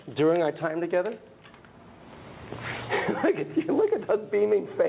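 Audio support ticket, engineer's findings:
No fault found; the call path sounds like a narrowband telephone codec, consistent with G.711 A-law, with nothing audible above 4 kHz, which is that codec's normal bandwidth.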